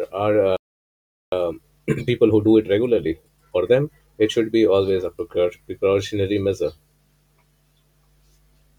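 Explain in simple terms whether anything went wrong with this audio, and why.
At 0.57 s the speech cuts out for about 0.76 s, until 1.32 s. That's a playback stall, likely the player running short of data. From 1.32 s to 4.32 s it races along at about 1.25 times normal speed, pitch unchanged. That's time-compressed catch-up, with the player trimming its backlog.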